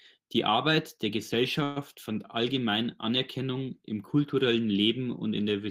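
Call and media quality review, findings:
Call audio freeze, 1.63–1.78 s, just before "fand allgemein". Sound stalls and the last fragment is stretched into a fading buzz for about 126 ms, then resumes intact. Likely jitter buffer underrun from delayed packets. Nothing lost; playout delay grows about 126 ms. Spectrogram: smeared, decaying horizontal band with no new onsets. Waveform: shrinking repetitive envelope, no flat-zero stretch.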